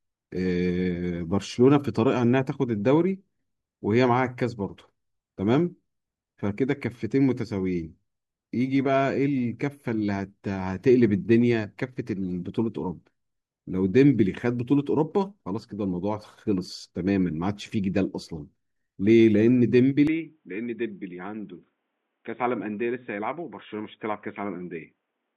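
At 20.07 s the speech abruptly turns dull and boxy and stays that way to the end, with no gap at the change. Nothing above 3.8 kHz survives, the level drops by about 5 dB, and a new, faint background noise appears about 50 dB below the speech. The likely cause is an input switched to a poorer device mid-recording, such as another microphone or a headset's call profile, whose narrower passband and different gain reshape the sound.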